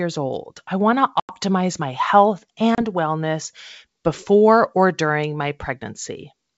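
At 1.20 to 1.33 s and again at 2.75 to 2.79 s, packet loss on an ADPCM call cuts holes of about 90 ms and 30 ms into the speech. That fits roughly ten lost packets, then a few. After each hard-edged silence, the decoder's predictor and step size lag the sender's, so the speech re-enters slightly distorted before settling.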